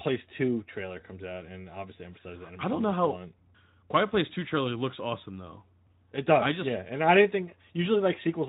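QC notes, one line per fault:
No faults to note for this clip.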